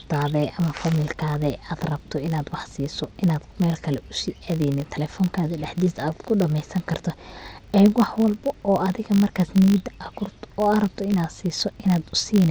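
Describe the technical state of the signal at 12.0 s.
At 12.0 s the filter restarted on every block is still present, as throughout the clip: each 20 ms block starts from zero state, producing a 50 Hz buzz that tracks the speech level.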